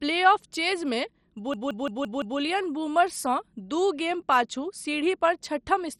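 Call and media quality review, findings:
MP2 compression, throughout: dull, gurgly, granular speech, nothing above about 13 kHz, upper sub-bands flickering in and out. Likely a starved Layer II encoder, around 56 kbps, coarse quantisation, top bands dropped.

System hang loop, 1.54 to 2.39 s, just before "बूमर्ससँ दू गेम पाछू": one 0.17 s chunk repeats 5 times, a stutter at about 5.9 Hz. Host or driver froze while hardware kept replaying the ring buffer, consistent with an 8192-sample buffer. Essentially no audio lost.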